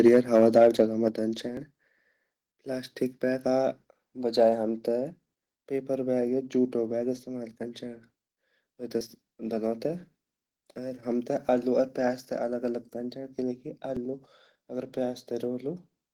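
A speech recording whose opening, from 0.00 to 0.81 s, carries a harsh, crackling edge on the loudest syllables. This is microphone overload: the peaks run about 3 dB past the converter's ceiling and a few percent of samples are flattened, most likely from input volume set too high. The microphone volume is stepped down twice in quick succession, by about 3 dB at 0.08 s and about 6 dB at 1.08 s. Each is a sudden level drop affecting voice and background alike, the pattern of call software reacting to the clipping by lowering the device's input volume. Audio missing between chunks shows up as brief skips at 1.57, 6.53, 9.01, 11.49 and 13.97 s, each losing roughly 20 ms with the two sides butted together. The spacing, multiples of about 2.5 s, points to audio dropped as a chunked recorder or processor closes one block and opens the next.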